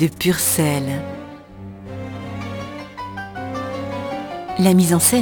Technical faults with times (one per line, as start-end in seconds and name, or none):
0.00-5.22 crude rate conversion